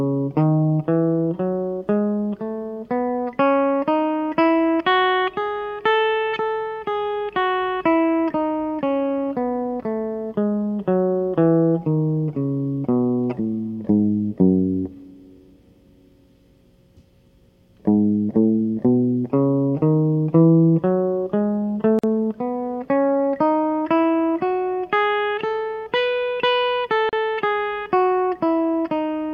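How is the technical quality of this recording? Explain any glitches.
The music is interrupted twice by short silences. At 21.99 to 22.04 s (46 ms) and 27.09 to 27.13 s (37 ms), gaps at joins of encoded pieces appear. Separately encoded sections were joined with their encoder start delay and end padding left in, so the sound cuts out with smeared edges. Unlike a dropout, nothing is skipped: the music resumes exactly where it stopped.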